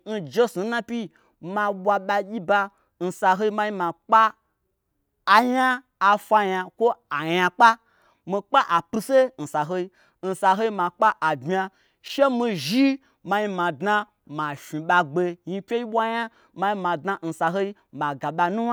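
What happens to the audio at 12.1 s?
Chunks out of order, 12.06 to 12.1 s: a 20 ms chunk of speech plays one chunk late, giving a brief jumbled blip.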